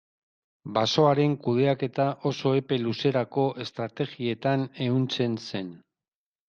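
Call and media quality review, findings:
No technical faults found in the speech signal; level, continuity and timing hold steady throughout the clip.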